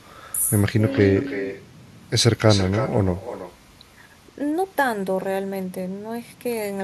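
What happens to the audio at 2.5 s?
At 2.5 s you're hearing echo with no canceller, and it runs through the whole clip. The far end's loudspeaker feeds back into its mic unchecked, so the speech returns roughly a third of a second later, about 11 dB quieter and thinner.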